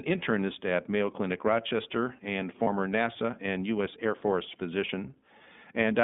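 Throughout, the speech carries the iLBC codec's narrowband sound: nothing below 200 Hz or above 3.6 kHz, and a plainly audible rough, synthetic edge from frame-by-frame excitation coding. The character fits the 13.33 kbps mode with 30 ms frames.

From 2.63 to 2.68 s there are lost iLBC frames: a 30 ms gap, which fits a single missing frame. The decoder fills it by repeating the last pitch cycle with added noise, heard as a brief held, slightly buzzy vowel before clean decoding resumes immediately.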